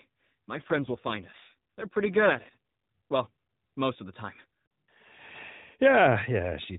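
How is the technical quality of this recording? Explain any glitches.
The recording has one clear glitch, an AMR rate drop, heard on a narrowband mobile-codec path that cuts everything above 4 kHz.

From 0.52 s to 2.57 s the link appears to have weakened, and the network pushed the AMR codec down to a lower mode, spending bits on error protection instead of describing the voice. The roughness fits a step from 12.2 kbps down to around 5.9 kbps. The band and continuity hold, but speech turns buzzier and more synthetic until the rate recovers.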